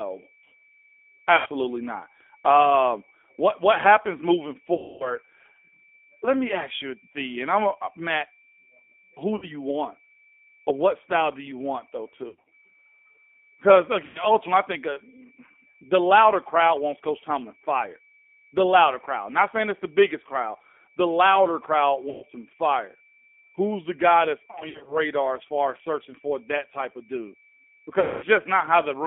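The speech runs through the G.729 codec from start to finish. Nothing passes below 250 Hz or above 3.5 kHz. The voice is rebuilt from a filter, a pitch predictor and a few pulses, which fits an 8 kbit/s stream. It sounds plainly rough and synthetic.

Packet loss, concealed by the speech codec, strikes at 1.36, 4.74, 9.36, 12.28, 14.05, 22.10, 24.51 and 28.00 s. The decoder stretches its last sound into a buzzy tone or coloured noise that fades. The longest, 260 ms, follows "what what happens moving". Another falls between "louder crowd" and "some fire". The losses at 12.28 and 24.51 s are scattered.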